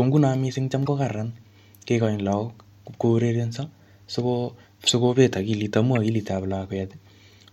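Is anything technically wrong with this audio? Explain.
Yes. The speech has corrupt frame decoded faults at 0.86 to 0.88 s, 4.87 s and 5.95 s: brief chirps or noise blips, the second loudest at about -10 dBFS. Damaged compressed frames were still decoded, so misread gains and codes put energy at wrong frequencies for roughly a couple of frames. A lost frame would instead leave a gap or a smeared concealment.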